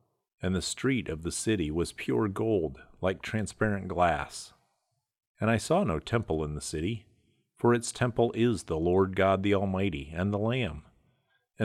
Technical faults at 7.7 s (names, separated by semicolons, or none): none